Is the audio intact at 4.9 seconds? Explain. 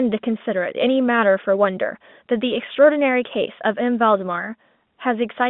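Yes, at 4.9 seconds the speech is intact, with no fault at that moment beyond the narrow telephone band of the G.711 coding.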